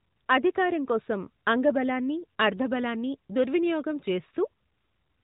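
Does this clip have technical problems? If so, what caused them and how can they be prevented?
No, there is nothing here to diagnose, so there is no cause to trace and nothing to prevent.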